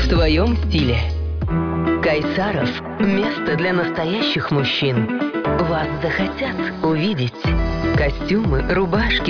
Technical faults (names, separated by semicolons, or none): none